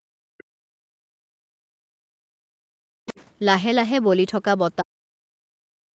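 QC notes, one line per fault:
0.00–0.35 s, background gated by the echo canceller: the room tone falls away by about 40 dB for roughly 0.4 s while the loudspeaker plays, then returns as the canceller releases. On a spectrogram the noise floor goes nearly blank; the waveform shows a flat, near-silent stretch.
0.38–0.44 s and 3.07–3.25 s, other side's voice leaking through: faint fragments of a second voice, around 30 dB and then 20 dB below the talker, likely loudspeaker echo the canceller left behind. Spectrograms show weak, patchy harmonic traces; the waveform shows small ripples.
0.63–3.08 s and 4.80 s to the end, speech suppressed in double talk: the talker's speech dips by up to around 40 dB over about two seconds in the first span, likely the canceller ducking both sides during overlap. Spectrograms show the speech energy dropping; the waveform shows sudden envelope notches.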